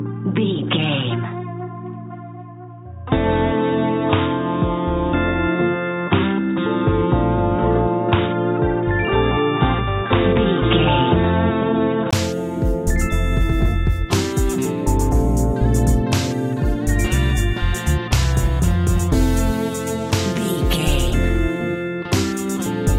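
Input switched to a poorer device, from the start until about 12.13 s: for those first twelve seconds the sound is narrow and boxy, with nothing above 3.8 kHz and a faint added noise floor well beneath the signal. At 12.13 s a 20 ms gap interrupts the audio, and the full bandwidth returns at much the same loudness. The likely cause is a lower-quality microphone or headset profile in use before the system switched inputs.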